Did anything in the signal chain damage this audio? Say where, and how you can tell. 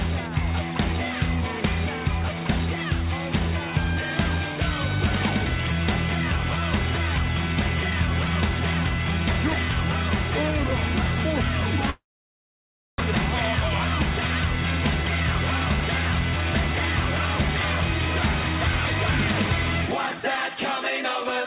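Yes. At 11.9 s the sound freezes into a fading buzz, then roughly a second of silence until it resumes at 13.02 s, with about 600 ms gone. This is likely a long network dropout: packets stopped arriving, the receiver concealed briefly, then gave up.

From 19.87 to 20.57 s the sound runs about 20% faster at unchanged pitch, sounding rushed. That is a jitter buffer speed-up: after the earlier delay the buffer held excess audio and trimmed repeated pitch-period slices, roughly 150 ms in total.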